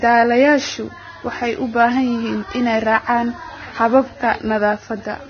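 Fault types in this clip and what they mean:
Vorbis compression: The whole clip has a grainy, hissy quality. Nothing comes through above about 6.5 kHz, and the treble just below that edge turns into a rough, noise-like wash. Consonant attacks are smeared and tonal parts sound coarse. The likely cause is heavy Vorbis encoding. That codec keeps a smooth spectral outline but quantises the detail on top so crudely that it comes back as noise, which points to a very low bitrate, roughly 18 kbps.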